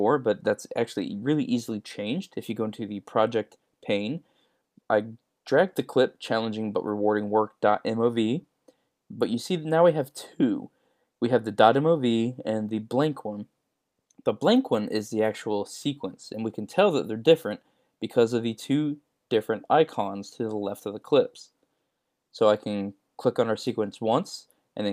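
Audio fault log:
Nothing stood out on listening; the audio sounded steady and even all the way through.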